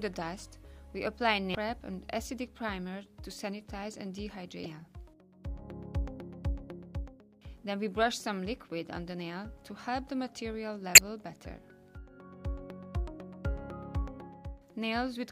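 At 1.52 s, 4.63 s and 10.95 s, damaged data in a compressed stream breaks the sound for about 0.03 s each time. Corrupt bytes make the decoder misread frames and lose sync. Each break is heard as a brief chirp, click or short gap.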